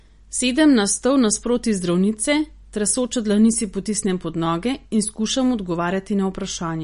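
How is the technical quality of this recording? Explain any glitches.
The technical quality is limited by audible MP3 compression damage throughout. Nothing is present above 10.6 kHz, and the speech has a watery, swirling texture, likely from a low-bitrate encode around 40 kbps that cuts the treble and switches weak frequency components on and off between frames.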